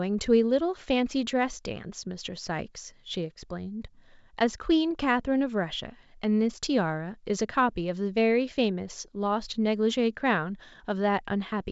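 No technical faults can be heard anywhere in the speech. The G.722 wideband telephone coding path shows in the top of the spectrum stopping near 7.7 kHz, and its coding leaves at most a faint trace, which fits the full 64 kbit/s mode.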